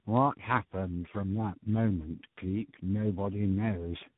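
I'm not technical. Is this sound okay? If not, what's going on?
No. Throughout, the speech suffers from tandem speech coding: it passed through three different phone-network speech compressors in a row, each re-squeezing the last one's damage. Unlike a single poor connection, the roughness and warbly, muffled quality stack up, and nothing above 3.8 kHz remains.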